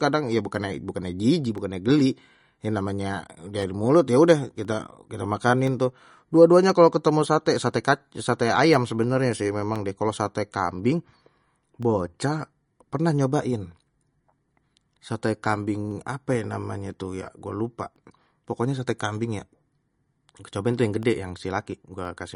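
MP3 compression is audible from the start and throughout the speech, likely the cause of its watery, swirly texture. Nothing survives above 10.6 kHz, and weak detail flickers between frames, which fits a low bitrate of around 40 kbps, with s sounds turning metallic and attacks smeared.

Periodic USB or driver dropouts run from 0.55 s to 22.05 s, one every 1.024 s, about twenty in all. Each time a background task stalls the audio path, a fraction of a millisecond is replaced by silence, heard as a regular tick whenever sound is present.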